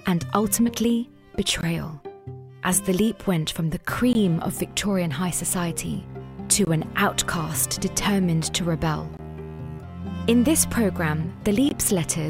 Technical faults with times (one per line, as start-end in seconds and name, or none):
1.61-1.63 gap between chunks
4.13-4.15 gap between chunks
6.65 gap between chunks
9.17 gap between chunks
11.69-11.71 gap between chunks